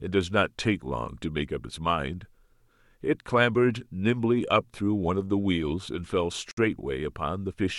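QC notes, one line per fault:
6.51–6.57 s: gap at a join of encoded pieces. A 60 ms gap, from untrimmed encoder padding, has softened edges, and speech resumes where it stopped, unlike a dropout.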